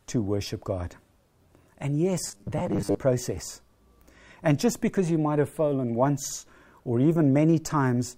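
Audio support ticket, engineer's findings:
Audio arriving too seldom, likely buffer underrun with last ~10 ms re-played to fill gaps, about half the signal repeated rather than fresh. Robotic sound from repeated short buffers, 2.26 to 3.00 s: speech becomes rigid metallic buzz fixed near 100 Hz.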